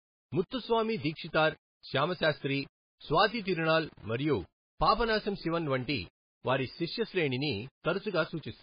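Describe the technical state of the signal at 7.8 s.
At 7.8 s the speech carries two faults that run through the whole clip. The signal was likely rounded to about 7 bits with no dither, so the rounding error tracks the speech. It is heard as grainy distortion sitting around 30 dB below the signal, roughening quieter stretches and decaying syllables.

The heavy compression is likely MP3 at a very low bitrate, around 16 kbps. Weak frequency lines are dropped and return from frame to frame, so the speech sounds watery and swirly with smeared consonant attacks, and nothing survives above 5 kHz, leaving it dull and band-limited.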